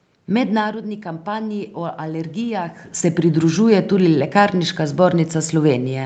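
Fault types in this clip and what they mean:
Automatic gain rising: the level at the microphone dropped by about 10 dB near 0.5 s, and the gain control responded by slowly lifting its gain by about 4 dB between 0.6 and 2.82 s, so the speech and the room noise behind it swell together.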